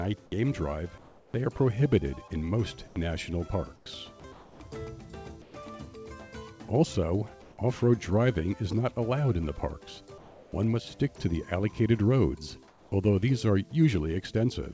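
Comfort noise replaces the background in the pauses at 0.98–1.34, 2.88–2.96, 3.76–3.86, 4.32–4.60, 5.42–5.54, 7.42–7.58, 10.18–10.52 and 12.68–12.92 s, where the real ambience becomes a flat, featureless hiss, generally about 2 to 7 dB quieter. This is likely discontinuous transmission with receiver-generated noise filling each gap. The band-limited call path, with nothing above 8 kHz, points to a wideband codec such as G.722.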